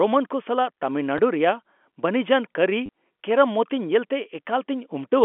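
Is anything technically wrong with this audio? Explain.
Yes, there are two brief packet loss with last packet repeated events in this speech, heard over telephone-band G.711 coding. At 1.18 s, a 10 ms gap points to a single lost packet. From 2.86 to 2.89 s, 30 ms fits three lost packets of 10 ms each. The receiver replayed the previous packet, so the longer run briefly buzzes robotically. Unlike a dropout, the hole is filled with repeated sound rather than silence.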